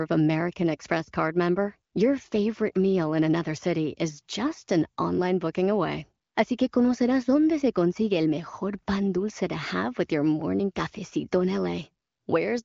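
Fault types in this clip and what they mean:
No faults can be heard in this speech clip.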